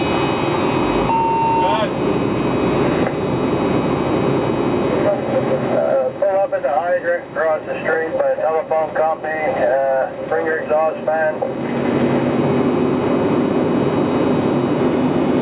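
Nothing is technically wrong with this audio.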